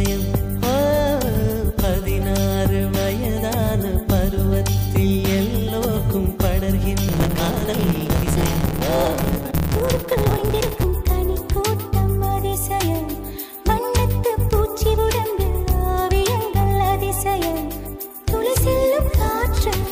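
From 7.08 to 10.84 s, a block size mismatch cuts off the end of each block, consistent with 512-sample writes. This causes a 138 Hz buzz and makes the sound run 1.6 times fast at near-normal pitch. A spectrogram shows evenly spaced vertical striations, and the waveform shows repeated jumps.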